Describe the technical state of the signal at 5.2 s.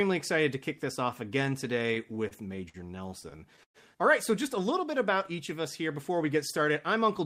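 At 5.2 s the speech signal is intact, with no dropout, clipping, glitch or other fault audible at that point.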